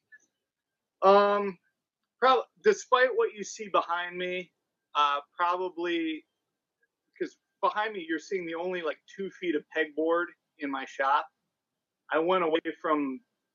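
Compressed frames skipped are the problem in this audio, with four small forward jumps at 2.81 s, 8.90 to 8.92 s, 11.17 s and 12.54 to 12.56 s. Each time, whole frames never got played, either because they were missing or because the decoder rejected them as damaged, so the sound leaps ahead by roughly 50 ms, 20 ms, 20 ms and 70 ms. The frame length of about 23.2 ms fits a 1024-sample frame at 44.1 kHz.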